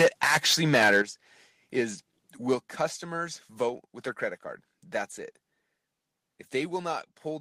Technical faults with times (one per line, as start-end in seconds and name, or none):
0.00-1.02 microphone overload
0.02 microphone volume stepped down
1.02 microphone volume stepped down